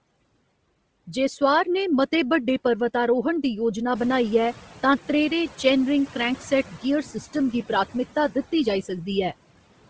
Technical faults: noise suppressor artifacts; Bluetooth LC3 compression; noise suppressor catching up

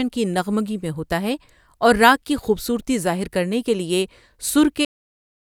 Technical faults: cut-off end

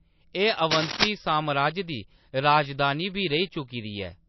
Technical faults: MP3 compression; cable scratch noise

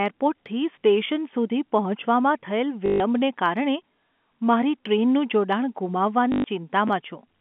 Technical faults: packet loss with last packet repeated; chunks out of order

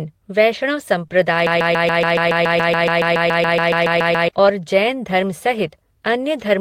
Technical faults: lost packet rebuilt from error correction; short concealed packet loss; broken-record loop

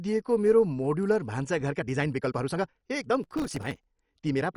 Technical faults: MP2 compression; time-stretched section; processor overload crackle

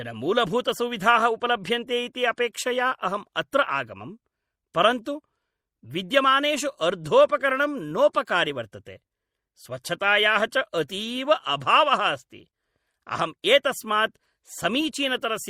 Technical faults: MP3 compression

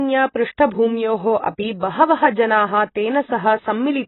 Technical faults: AAC compression

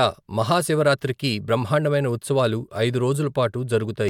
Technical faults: none

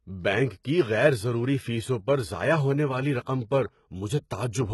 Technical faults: HE-AAC compression

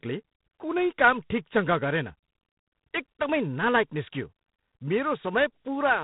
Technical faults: G.726 ADPCM; bit error spike

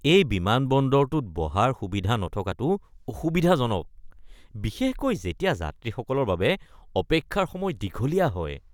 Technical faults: none

